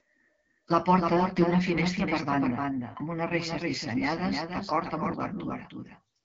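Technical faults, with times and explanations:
Throughout, doubled audio track: a second full-band copy of the speech trails by roughly 300 ms, a few dB quieter, with no room colour, likely from a second, slower capture path.
Throughout, AMR wideband (HD Voice) codec: the speech sounds plainly rough and raspy, with nothing above 7.8 kHz, which fits one of AMR-WB's lowest rates, around 8.85 kbit/s.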